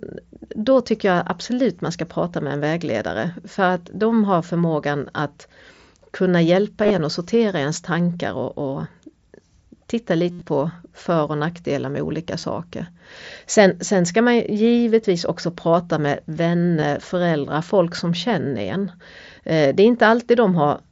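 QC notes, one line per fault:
1.79, 6.84–6.91, 10.31–10.46, 12.40–12.43 and 16.80–16.82 s: concealed Bluetooth headset packet loss. Headset audio dropped and the receiver filled each gap by repeating the closest-matching recent stretch of waveform. A 15 ms hole follows "tycker jag absolut". Near "kunna hjälpa", 45 ms is lost in pieces over 60 ms. At 10.3 s, 112.5 ms goes over 150 ms, with one 82.5 ms run heard as a held buzzy tone that warbles as real sound resumes. Shorter fills sit at 12.4 s and just before "föräldrar folk som känner".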